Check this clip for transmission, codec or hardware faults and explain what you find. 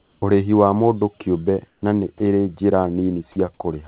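Two kinds of transmission fault are audible in this speech clip. The audio also has no content above 4 kHz, which points to a narrowband telephone codec such as G.711.

Comfort noise in place of the background appears from 0.00 to 0.22 s and from 1.68 to 1.82 s, between "wa mũndũ kĩũmbe" and "na nĩ ĩrĩ njĩra". The real background, about 43 dB below the speech peaks, turns into a flat, featureless hiss about 4 to 5 dB quieter. The likely cause is discontinuous transmission, with the receiver synthesising noise during pauses.

Sound dropped by the voice detector occurs at 2.18 to 2.20 s, between "mũndũ kĩũmbe na nĩ" and "ĩrĩ njĩra", and at 3.32 to 3.36 s, after "na nĩ ĩrĩ njĩra". About 20 ms of speech is lost each time and replaced by steady noise, heard as a brief clipped gap. This is likely the sender's detector mistaking speech for background.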